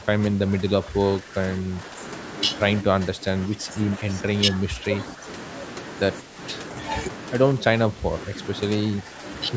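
Speech where the voice keeps sinking about 10 dB at 0.0–1.99, 2.82–4.04, 4.51–5.26, 6.22–6.38, 7.57–8.39 and 8.91–9.24 s, likely speech suppressed in double talk by the echo canceller.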